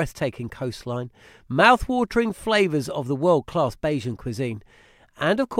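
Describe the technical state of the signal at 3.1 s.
At 3.1 s the speech signal is intact, with no audible dropout, distortion, noise burst or other fault at that point.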